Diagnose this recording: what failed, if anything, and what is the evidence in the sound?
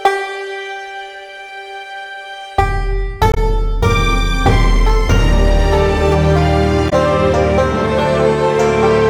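Codec stage: damaged data in the compressed stream. Brief glitches at 3.31–3.38 s and 6.86–6.93 s. Corrupted frames make the decoder lose sync and resynchronise.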